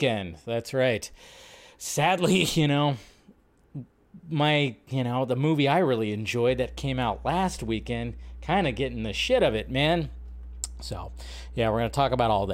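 At 6.50 s, right after "the movie I really", mains hum enters and holds until the clip ends at 12.53 s. Power-line current, probably through a ground loop or a nearby transformer, has leaked into the signal path, laying a steady 60 Hz tone with low harmonics under the speech, roughly 15 dB below it. Unlike handling noise or wind rumble, which are broadband and shifting, this is a fixed, pitched drone that never changes.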